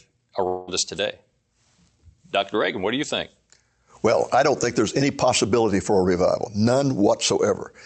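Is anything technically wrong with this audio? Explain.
Yes. From 0.47 to 0.70 s, just before "us today", the sound smears into a fading buzz. This is likely a long network dropout: about 0.2 s never arrived, and the receiver stretched the last sound to cover the gap.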